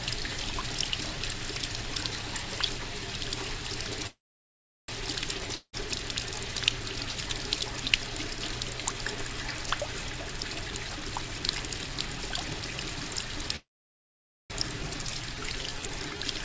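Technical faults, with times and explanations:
4.07–4.91 s, call audio freeze: the sound trails off into about 0.73 s of silence, then resumes where it stopped. Packets were likely held up and the jitter buffer ran empty, adding a 0.81 s gap.
5.56–5.76 s, long network dropout: a short fading tail and brief silence fill about 0.17 s, and afterwards about 0.18 s of sound is likely never heard because audio stopped arriving.
10.14–13.50 s, jitter buffer speed-up: the sound runs hurried at 121% speed with unchanged pitch, as the receiver trims roughly 0.7 s of short pitch-period slices to shed excess delay.
13.56–14.53 s, call audio freeze: another stall, about 0.86 s of it silent, before the sound carries on intact. Delayed packets likely starved the jitter buffer, inserting a 0.94 s gap.
14.83–14.86 s, skip ahead: playback jumps forward almost seamlessly, losing roughly 0.7 s of sound, as audio was dropped while later material was already waiting.
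15.03–16.41 s, jitter buffer slow-down: the sound drags at 89% speed, pitch unchanged, because the receiver repeats single pitch periods, adding 0.16 s to rebuild its reserve.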